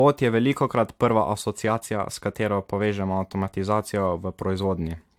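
A speech recording with generation loss throughout: the sound is swirly, hollow and smeared, with blurred attacks, and the spectrum stops near 19.4 kHz. That high cutoff separates it from one low-bitrate pass. The likely cause is around four AAC-LC passes, consistent with 96 kbit/s.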